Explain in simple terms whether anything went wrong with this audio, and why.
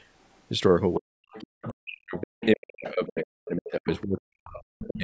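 Yes, two things went wrong. The first is speech suppressed in double talk: from 0.97 to 1.17 s, and again from 1.68 s to the end, the talker's voice drops deeply in level. This likely happened because the echo canceller turned down the talker along with the loudspeaker sound.

The second is the other side's voice leaking through, at 1.31–1.69 s, 2.19–2.46 s, 2.84–2.89 s, 3.93–4.03 s and 4.79–4.97 s. A second voice can be heard, quieter than the talker, likely because the echo canceller did not fully remove loudspeaker sound from the microphone.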